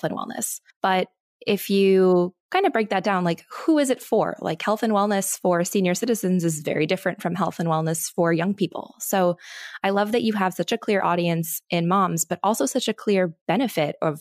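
Speech recording with no audible technical faults anywhere in the clip.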